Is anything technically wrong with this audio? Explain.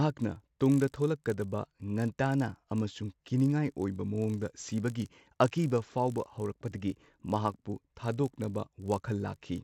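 Yes, one problem runs through the whole speech clip: the resampler restarted on every block. Each 20 ms chunk, likely going from 16 kHz up to 48 kHz, was converted on its own with the wrong neighbours at its edges. That leaves a 50 Hz buzz under the voice that drops out in the gaps.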